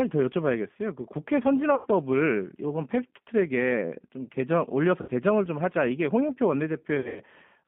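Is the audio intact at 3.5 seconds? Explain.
No. At 3.5 seconds the sound carries G.729 codec damage, present across the whole clip. The speech is rebuilt from a vocal tract filter, pitch predictor and sparse pulses, which fits an 8 kbit/s line. The band stops near 150 Hz and 3.4 kHz. It sounds rough and synthetic.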